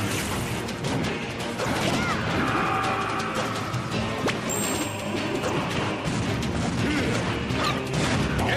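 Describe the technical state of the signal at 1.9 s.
At 1.9 s the sound turns briefly garbled or jumbled, from 1.81 to 1.95 s. This is chunks out of order: a block of about 46 ms plays two blocks late, after the two that should follow it. Nothing is missing, but the sequence is scrambled, leaving three hard joins.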